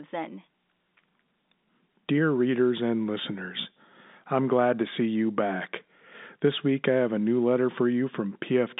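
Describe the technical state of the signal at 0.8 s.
At 0.8 s the audio is intact, carried through ordinary G.711 telephone coding with its narrow line band of roughly 150 Hz to 3.7 kHz.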